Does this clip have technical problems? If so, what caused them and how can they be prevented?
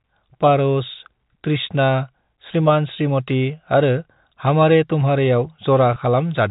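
Yes. Near the end of the speech, from 5.94 to 5.96 s, a stretch of about 20 ms of the stream failed to arrive, which fits a single lost packet, and the receiver concealed it with packet loss with pitch repetition. It looped the most recent pitch cycle of the voice to fill the hole. Because the gap is this short, it comes across as a brief held, slightly buzzy catch in the voice rather than a dropout, and then the speech carries on. The narrowband telephone sound of the G.711 channel is audible throughout. To prevent this, carry the call over a network path with enough jitter-buffer depth and forward error correction or redundancy so that a single missing packet can be rebuilt rather than patched over.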